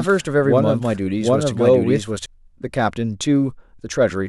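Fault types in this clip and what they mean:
Doubled audio track: a second, equally loud copy of the speech trails roughly 0.7 s behind from the start, stopping abruptly at 2.26 s, likely from a duplicate capture path.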